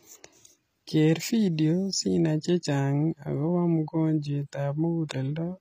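It's a speech clip with HE-AAC compression damage throughout: nothing above 15.4 kHz, and gritty, lispy s sounds from rebuilt treble, likely a low-bitrate encode, around 24 kbps.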